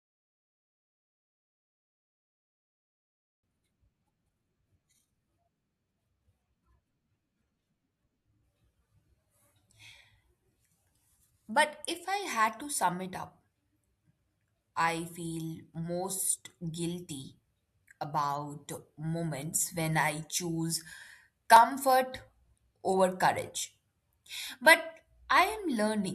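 Clock drift buffer slips run from 1.20 s to 24.47 s: a click recurs every 2.91 s, around ten in all, while the speech continues. The likely cause is two devices on independent clocks disagreeing by roughly 150 ppm. The buffer between them slowly drifts until a block of about fifteen samples is dropped or repeated, which produces each tick and sets its steady rhythm.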